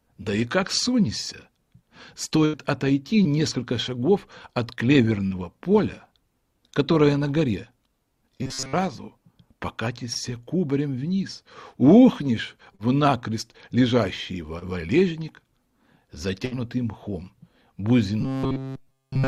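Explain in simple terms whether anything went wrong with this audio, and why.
Burst of packet loss at 2.45–2.55 s and 16.45–16.53 s: a run of audio never arrived, so the last sound was stretched and faded for about 80 ms and 60 ms.

Short concealed packet loss at 3.23–3.27, 5.27–5.33, 10.13–10.17, 12.75–12.81 and 14.59–14.63 s: 20 to 40 ms went missing each time, patched by continuing the previous sound, leaving a brief smear or wobble.

Robotic sound from repeated short buffers at 8.43–8.73 s and from 18.21 s to the end: the sound becomes a rigid metallic buzz at 133 Hz. It is likely caused by one tiny slice of about 7.5 ms being replayed over and over. That replaying fills most of the first stretch and all of the final one.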